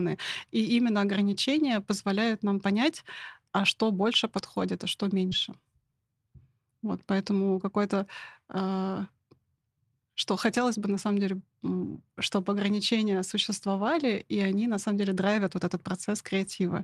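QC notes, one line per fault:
4.01–4.03 s, lost packet rebuilt from error correction: about 20 ms comes through grainier and noisier than the audio around it, with no gap. This fits a single dropped packet replaced by the low-bitrate backup copy that Opus carries in the next packet. The decoder played that coarser copy, so the sound continues without a hole but loses detail, and any top-end content has to be estimated.
5.29–5.33 s, short concealed packet loss, right after "подходит а что": the first 20 ms or so is a brief smear. Nothing arrived in time for that stretch, so the receiver extended the preceding sound, following its pitch if voiced or substituting shaped noise if not. The second 20 ms, 5.31–5.33 s, is a lost packet rebuilt from error correction. That part is rougher but present.
10.51–10.57 s, lost packet rebuilt from error correction, just before "бы на самом": a longer rough patch of about 40 ms, which points to two separate lost packets filled from their backup copies. 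The decoder played those low-bitrate versions, so there is no silence, but this stretch sounds coarser and noisier than its surroundings. Any high-frequency content here is an estimate, not the original.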